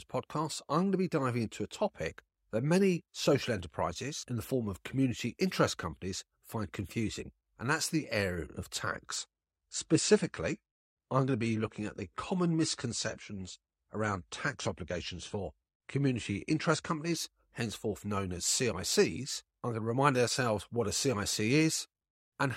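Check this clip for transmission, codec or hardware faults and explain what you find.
One fault is present. Adaptive stream at a lower bitrate, 9.17 to 17.17 s, after "that's the area of": a slowed connection forced a leaner encoding, consistent with AAC dropping from 96 to 32 kbit/s. Speech suddenly loses everything above 9.8 kHz and gains codec artefacts, without any gap, recovering at "henceforth known as".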